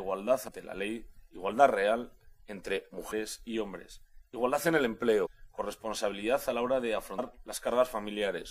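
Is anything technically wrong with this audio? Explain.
Yes. There is damaged data in the compressed stream. Four brief blips occur at 0.47 s, 3.11 s, 5.25 to 5.27 s and 7.18 s. At each point the decoder meets corrupted bytes, misreads or discards the affected frame, and resynchronises at the next frame header, producing a glitch about 20 ms long. On a spectrogram, each appears as a narrow vertical disturbance that breaks the surrounding texture. The waveform shows a short, jagged discontinuity.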